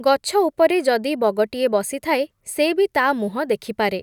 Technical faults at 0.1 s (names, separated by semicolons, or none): none